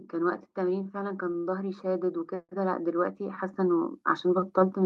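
From 0.1 s to the end, automatic gain rising: the gain control judged the input too quiet and kept increasing its gain, so the speech and the background noise swell together in one slow, continuous lift rather than staying at a steady level.

Over the same stretch there are four short stalls from a late packet, at 0.83 to 0.87 s, 1.32 to 1.36 s, 1.38 to 1.47 s and 2.42 to 2.51 s. Each time the jitter buffer ran dry and the receiver held the last sound for about 16, 23, 70 and 66 ms until data arrived, then resumed where it left off. Nothing is lost, but the sound briefly drags, with a faint buzz or dip.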